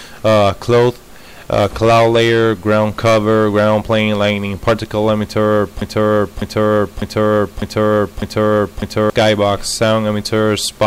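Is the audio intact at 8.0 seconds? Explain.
No. At 8.0 s the audio is caught in a broken-record loop running from 5.82 to 9.10 s: a 0.6 s fragment plays five times back to back, likely because playback stalled and kept resending its last buffer. Unlike an echo, the repeats are identical, undecaying, and replace the audio rather than overlaying it.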